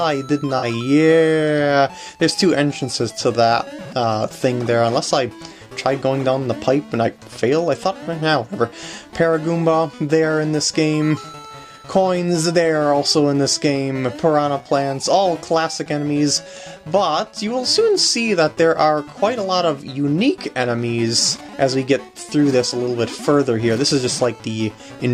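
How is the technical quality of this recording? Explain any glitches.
There is one glitch, very early on. From 0.58 to 0.64 s the sound briefly turns smeared and noisy, a short phasey patch lasting about 43 ms, before it returns cleanly. This is AAC frame loss with concealment: a stretch of coded audio went missing, which fits two frames, and the decoder papered over the gap by rebuilding it from the last good spectrum. Because the gap is so short, the patch doesn't fade toward silence; it comes through as a brief blur.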